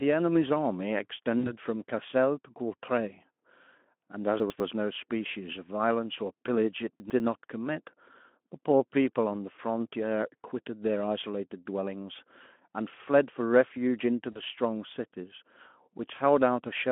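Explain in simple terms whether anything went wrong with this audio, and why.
Two kinds of fault affect this speech recording.

VoIP packet loss concealed by the speech codec: at 1.39 to 1.52 s and again at 14.31 to 14.40 s, about 40 ms of audio never arrived, which fits two lost packets each time. The decoder filled each gap by stretching the last sound it had and letting it fade. That brief stretch comes out buzzy or smeared, and the speech stays weak and blurred for a moment after real audio returns.

Chunks out of order: at 4.4 to 4.6 s and again at 7.0 to 7.2 s, a 100 ms piece of audio arrived one piece late. It was played after the piece that should have followed it. No audio is missing, but those moments sound jumbled. Underneath, the Speex codec gives the speech the narrow, telephone-like band it normally has.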